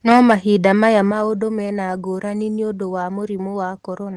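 Microphone overload runs from 0.09 to 0.33 s, just before "maya maũndũ mena ngũrani". The peaks exceed the converter's ceiling by about 8 dB, flattening around one sample in twenty, so the opening syllables carry a harsh, crackling edge, likely from an input volume set too high.

Microphone volume stepped down at 0.12 s, by about 3 dB, in the middle of that distorted stretch, and again at 1.11 s, by about 6 dB, just before "maũndũ mena ngũrani nĩ". Each time, sound and background drop abruptly in level, likely because the call software reduced the device's input gain after detecting clipping.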